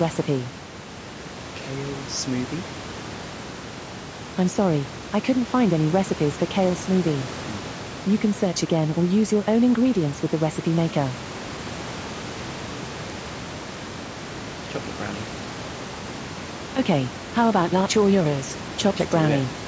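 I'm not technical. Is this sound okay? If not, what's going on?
Yes, nothing in this speech recording points to a technical problem. It has the slightly narrow, less airy sound typical of a call microphone, and a little room noise sits well below the voice.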